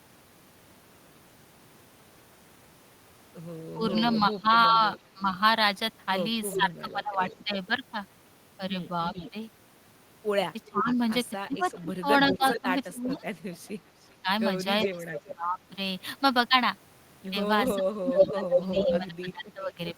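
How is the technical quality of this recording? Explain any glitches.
The recording has clear technical faults. Echo leaks back into the line three times, and the voice is pushed down during overlapping talk three times.

Echo leak runs from 3.89 to 7.45 s, 9.14 to 15.7 s and 17.67 to 18.99 s. A delayed copy of the voice trails it by about 400 ms. It starts faint, roughly 15 dB below the speech. It grows to about 10 dB below, and by the end it matches the speech level. The likely cause is a loudspeaker on one side whose echo canceller fails to remove its own playback.

Speech suppressed in double talk occurs from 3.75 to 7.56 s, 10.65 to 15.6 s and 17.74 to 19.96 s. The voice dips, loses its high end or cuts out in pieces. The drops reach roughly 15 dB at first, then about 20 dB. Around one to two seconds are lost in each stretch. This is likely an echo canceller mistaking live talk for echo and turning both down.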